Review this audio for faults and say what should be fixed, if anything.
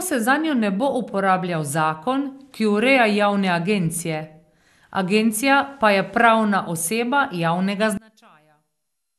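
Throughout the speech, the sound is swirly, smeared and hollow, with transients blurred and nothing above 12.6 kHz. This is likely generation loss: repeated lossy passes, pointing to around seven MP2 encodes at 128 kbit/s, each requantising on a shifted frame grid so noise and spectral holes pile up. A single 128 kbit/s MP2 encode would sound far cleaner; the hollowness is the tell. Keep a lossless master and encode once, at the end.

From 7.97 s to 9.18 s, the speech in a mono sum drops by about 30 dB, leaving only a faint residue. The likely cause is one channel inverted: with reversed polarity, the centred material common to both channels cancels and only their small difference survives. A dropout would go silent, and a level fault would keep the tone intact; here a faint copy persists. Check channel polarity and mono compatibility before delivery.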